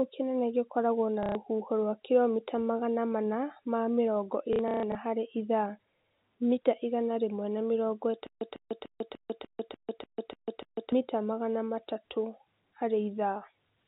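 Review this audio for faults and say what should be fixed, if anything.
Packet loss with last packet repeated: at 1.23 to 1.35 s and again at 4.53 to 4.95 s, the receiver lost packets and replayed the last one to fill the gaps. The first gap is 120 ms. The second totals 240 ms scattered over 420 ms, with its longest run 150 ms, which fits packets of about 30 ms. The replayed packets seldom join the next in step with the pitch, so the sound buzzes at roughly 33 Hz, a short robotic stutter. A deeper jitter buffer with real concealment, such as pitch-synchronous waveform extension or interpolation, would fix this.

Stutter with silent gaps: from 8.27 to 10.92 s, the same 150 ms burst plays nine times, each followed by about 145 ms of digital silence, repeating every 295 ms. The likely cause is a stalled player or stream that replays its last fragment on each retry and then runs empty, so the audio meant for that span is lost. 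Buffer underruns should trigger rebuffering or a clean pause instead of looping stale data.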